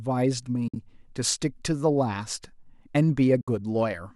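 At 0.68 s the speech fades into a soft-edged gap of about 70 ms and fades back by 0.76 s. The same hole returns from 3.41 to 3.48 s. This is AAC frame loss with muting. The decoder zeroed the spectrum for the missing frames, and the overlapping windows tapered the sound out and in. The length fits around seven short frames of the light low-delay AAC coding, likely AAC-ELD, that carries the clip.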